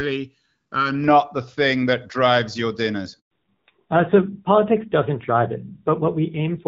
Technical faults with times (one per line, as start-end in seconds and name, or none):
3.19-3.31 handover gap
3.31-6.68 fallback to narrowband